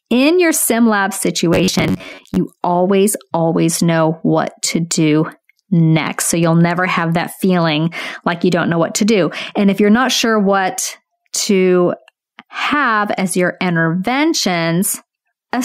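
It's a speech clip with gain pumping all the way through: the level swells and ducks by about 5 dB, likely a fast limiter fighting gain set too high. From 1.53 to 2.36 s, between "in your sim lab" and "always always know what", there's robotic sound from repeated short buffers, a rigid 93.8 Hz buzz with about half the audio repeated, likely from roughly 10.7 ms chunks looping.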